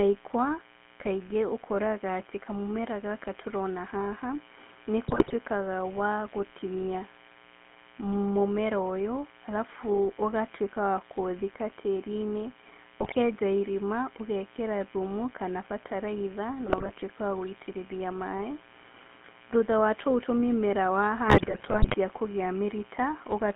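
Speech runs through a telephone chain with three distinct problems. Under everything sits a mains buzz built on 60 Hz, roughly 25 dB below the speech. It is a raspy, steady tone with harmonics climbing well up the spectrum, the signature of sharp switching spikes from a dimmer, rectifier or unshielded cable, twice per mains cycle. Unlike a pure hum, it has that edgy, multi-harmonic rasp. Unlike codec roughness, it keeps going in the pauses between phrases.

The voice itself carries the gravelly, buzzy grain of the GSM full-rate codec, which fits the 13 kbps coder. It rebuilds the voice from a vocal-tract filter excited by a sparse, regular pulse train, so the roughness rides on the speech and vanishes when speech stops. The band is confined to about 200 Hz to 3.4 kHz, giving a narrow, telephone-like tone.

On top of this come GSM bit errors at 5.08 to 5.34 s, 13.00 to 13.17 s, 16.66 to 16.90 s, and the longest at 21.28 to 21.95 s. 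Corrupted filter, pitch and gain values make the voice squawk, pop and gargle, with sudden level jumps and bent timbre. This points to runs of damaged 20 ms frames on a weak radio link. Packet loss would leave gaps or smeared repeats instead, but here the decoder keeps producing sound, just garbled and erratic.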